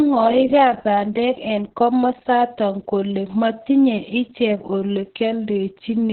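Throughout, the speech sounds muffled, hoarse and faintly robotic, with nothing above about 4.2 kHz. That is heavy Opus voice compression: the SILK coder has cut the band to narrowband and coded the excitation coarsely, which fits a bitrate of around 6 kbps.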